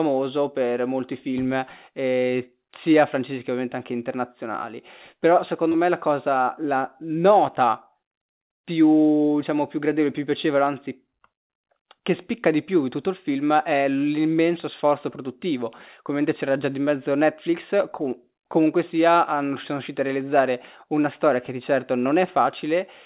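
At 5.72 to 5.76 s, just before "me la cosa la", there is a short concealed packet loss. About 20 ms of audio reached the decoder too late. The receiver stretched the preceding sound over the hole, then blended back. It comes across as a brief smear.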